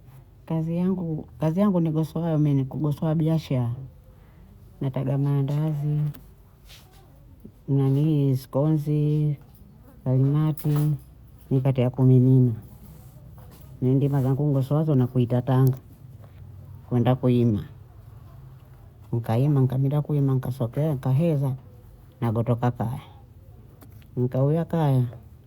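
No technical faults are audible anywhere in this recording.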